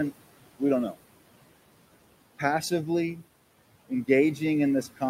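Noise suppressor artifacts run through the whole speech clip. The processing judges each frequency band frame by frame and pulls down whatever it reads as steady noise, cutting it by about 18 dB. The room noise, sitting about 16 dB below the speech, therefore drops away in the gaps between words and comes back up underneath them. On a spectrogram the background floor appears as dark voids between phrases and fills in behind each burst of speech. The waveform's low-level floor pumps in step with the speech.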